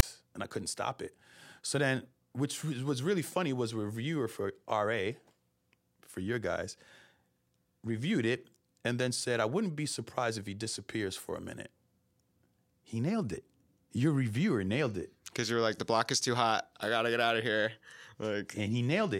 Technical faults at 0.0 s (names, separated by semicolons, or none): file tags played as audio